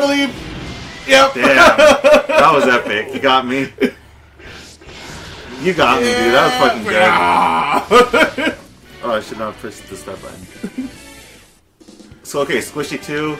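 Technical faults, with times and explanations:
0.12–13.38 s, clock slip clicks: a soft, steady rattle of single-sample ticks about every 40 ms, several hundred in all. The likely cause is two unsynchronised clocks drifting apart by around 700 ppm, so a sample is dropped or repeated at each whole-sample gap.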